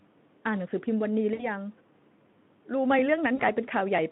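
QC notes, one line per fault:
1.33–1.47 s and 3.35–3.43 s: VoIP packet loss concealed by the speech codec. About 60 ms, then 40 ms, of lost audio is filled by the decoder stretching its last pitch and filter into a fading buzzy tone or coloured noise that takes time to recover.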